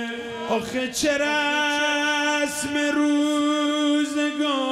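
Nothing is technically wrong with the audio in this clip.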